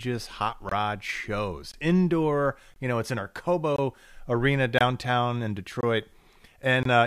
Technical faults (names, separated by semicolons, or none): gap between chunks